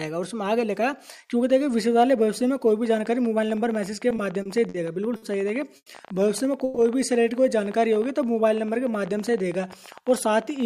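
From 2.86 s to the end, a train of clicks runs over the audio, likely from interference from nearby equipment or a faulty connection or power supply. About 14 pulses a second arrive at an uneven pace, each of much the same shape and about as loud as the sound itself, ticking and popping through pauses too.

Between 4.09 and 4.77 s, late-arriving packets repeatedly emptied the jitter buffer, producing repeated stalls (stutter). The receiver bridged four gaps, the longest 50 ms and 110 ms in all, by continuing the last sound, so the audio drags and hiccups without anything actually going missing.

At 5.16 to 5.25 s, a short stall from a late packet occurs. One packet was not ready on time, so the receiver held the previous sound for 60 ms until it arrived. That moment is stretched unnaturally before the audio resumes where it left off.

Two call audio freezes follow, the likely cause being packets held up in transit that drained the jitter buffer. 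At 5.76 to 5.89 s, 100 ms is filled, with the held sound fading into about 50 ms of silence. At 6.64 to 6.79 s, a 120 ms fill stays audible throughout as a fading buzz or hiss. Nothing is lost in either case, but each inserts a gap and pushes the rest of the audio later.

From 7.80 to 10.06 s, a jitter buffer slow-down builds reserve. Repeated pitch periods and fragments of pauses add 159 ms, so the audio plays at about 93% speed with unchanged pitch, sounding drawn out.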